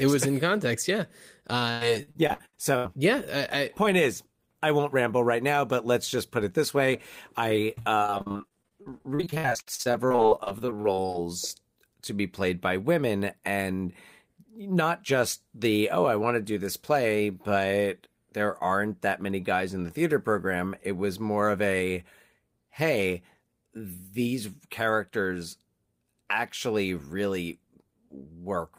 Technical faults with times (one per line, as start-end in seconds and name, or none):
1.71-2.87 repeated packet loss (robotic sound)
7.75-11.16 repeated packet loss (robotic sound)